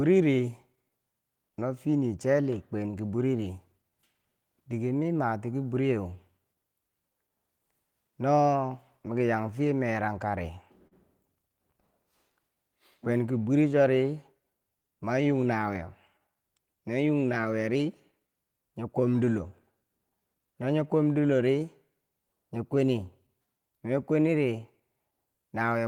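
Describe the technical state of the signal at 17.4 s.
At 17.4 s you're in the middle of a stretch of repeated timing corrections that runs from 12.26 s to 25.43 s. The receiver keeps slipping in short repeated bits to stay in step, so the speech plays at about 97% speed, with small hiccups.

The cause underneath is clock drift between sender and receiver. The sender's clock runs roughly 3% slow, so the jitter buffer keeps draining. Across the stretch those repeats pad out something like 0.4 s in total.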